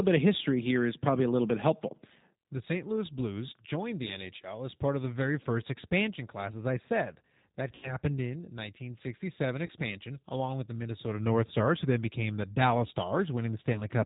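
The whole clip of speech passes through the G.729 codec, with the damage plainly audible. At 8 kbit/s the coder rebuilds each 10 ms frame from a vocal tract filter, a pitch predictor and a handful of pulses, so the speech sounds slightly rough and synthetic. Nothing above 4 kHz survives, which leaves the voice band-limited and dull.

VoIP packet loss concealed by the speech codec occurs three times. From 7.75 to 7.98 s, roughly 80 ms of audio is missing, consistent with eight consecutive 10 ms frames. The decoder extends the last pitch and filter at falling gain, producing a buzzy tone or coloured noise that fades, and the voice stays weak for a short while after normal audio resumes. Shorter gaps at 9.66 to 9.72 s, about 30 ms, and at 13.73 to 13.82 s, about 20 ms, produce brief smeared dips in the same way.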